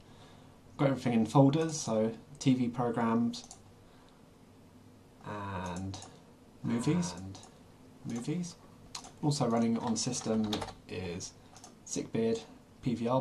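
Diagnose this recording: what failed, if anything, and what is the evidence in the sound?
A doubled audio track runs from 6.65 to 9.61 s. A full-band copy of the sound trails about one and a half seconds behind, roughly 5 dB quieter, with no decay or room colour, and it starts and stops abruptly. The likely cause is a second, slower capture path or a misaligned edit at the routing or buffer stage.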